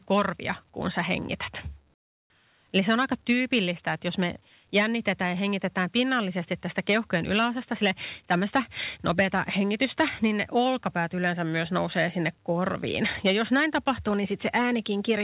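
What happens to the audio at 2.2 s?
At 2.2 s the pause carries comfort noise in place of the background. From 1.94 to 2.3 s, about 360 ms, the real background drops away. A steady, featureless hiss takes its place, about 25 dB quieter. Like the rest of the call audio, it has nothing above 4 kHz. The likely cause is discontinuous transmission. The sender stopped sending during the pause, and the receiver filled the gap with synthetic noise until the sound resumed.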